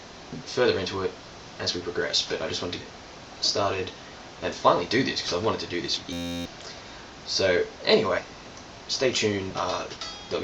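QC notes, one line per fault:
1.23 s, 2.80–2.84 s, 5.96–5.99 s, 8.18–8.22 s and 9.50–9.52 s, compressed frames skipped: at each point the audio jumps forward, dropping roughly 30, 100, 70, 150 and 100 ms respectively. Whole frames never reached playback, either missing from the stream or refused by the decoder as damaged, so each jump is a multiple of the 10 ms frame length.
6.13–6.45 s, system hang loop: an 11.61 ms slice of sound repeats back-to-back many times, producing a steady buzz at 86.1 Hz, and about 300 ms of real audio is lost. The host or driver stalled while the audio hardware kept cycling the same ring buffer, and the loop length fits a 512-sample buffer. A loop this short fuses into a pitched drone, not a stutter.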